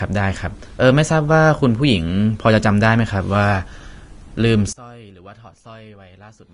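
Throughout, the speech was likely squeezed through a low-bitrate encoder and then saved at a high bitrate. Nothing exists above 10.6 kHz, and the first pass's artefacts remain. From 4.73 s to the end at 6.54 s, one channel is likely inverted, so the mono sum cancels and the speech drops about 24 dB to a faint residue.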